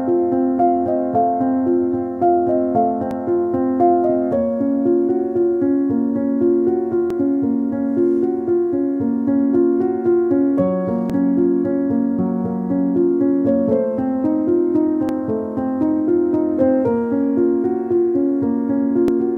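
Audio missing between chunks shows up as five brief skips at 3.11, 7.10, 11.10, 15.09 and 19.08 s, spaced almost exactly 4 s apart. At each one, a few milliseconds of sound vanish and the audio on either side is butted together with no gap of silence, so the flow jumps forward abruptly. The steady 4-second spacing points to a likely cause in a recorder or processor handling the audio in 4-second blocks and dropping a sliver at every handover.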